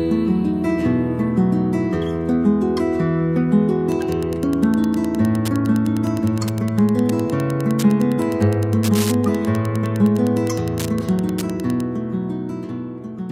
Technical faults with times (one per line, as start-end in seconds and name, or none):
3.84-11.84 Wi-Fi interference